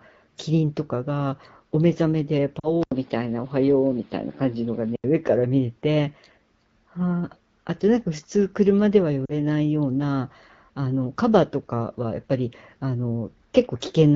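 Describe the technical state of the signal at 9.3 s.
From 9.26 to 9.33 s, lost AMR speech frames leave a 40 ms gap, consistent with two 20 ms frames. The wideband decoder repeats the last pitch and vocal-tract settings at falling gain, giving a smeared, fading warble rather than a hard click or sudden silence.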